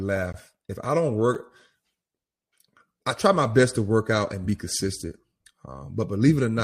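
At 0.33 s the speech drops out for 16 ms in a block of digital silence. A run of samples was replaced by zeros. The cut and return have no fade, so the sound stops and starts abruptly around a very short gap.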